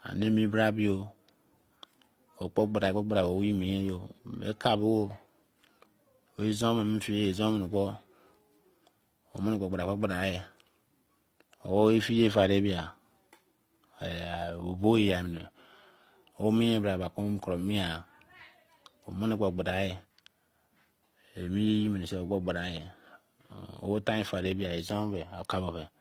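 The speech has likely been through transcoding between lossy codecs for its whole length, with the artefacts pointing to an HE-AAC encode at around 32 kbit/s that was then re-encoded to Opus at around 24 kbit/s. The Opus stage spends its small bit budget re-coding the HE-AAC damage while adding its own, so both codecs' kinds of coding grit are heard together throughout, and nothing is present above 20.1 kHz.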